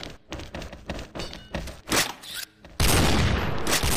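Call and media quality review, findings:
No faults found in this call and media quality review.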